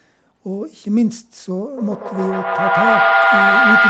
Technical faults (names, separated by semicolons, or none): feedback howl